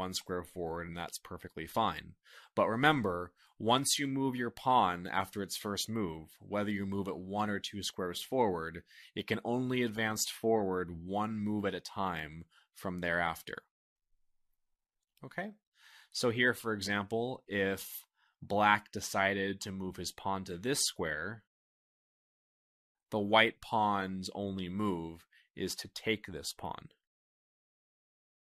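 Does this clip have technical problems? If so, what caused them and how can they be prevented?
No, there are no technical problems to point to in this clip. With nothing going wrong, there is no cause to explain and nothing that needs preventing.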